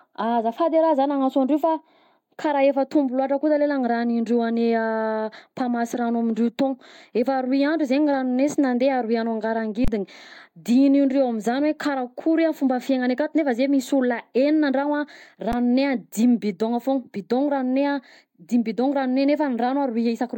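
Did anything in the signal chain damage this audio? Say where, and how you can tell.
Yes. Twice the speech briefly freezes: from 9.85 to 9.88 s the waveform goes flat for 32 ms, and at 15.52 s it stalls again for about 11 ms, which fits a 512-sample buffer. Each time roughly that much live audio was skipped. This is an underrun with held sample at the driver or buffer stage: the output buffer ran dry and the converter held its last value until data returned.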